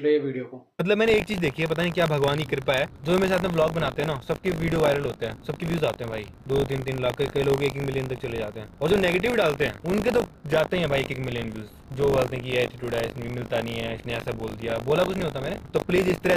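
From 1.04 s onward, a robotic 50 Hz buzz: buffer tearing, where a small slice of each buffer replays audio from about 40 ms earlier.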